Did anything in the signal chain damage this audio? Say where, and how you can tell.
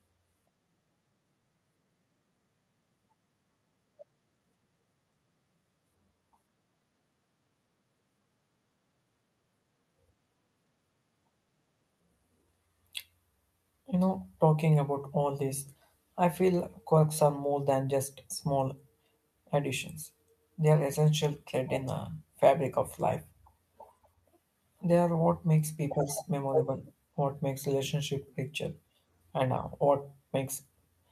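No, nothing in the signal chain stood out as damaging this speech on listening.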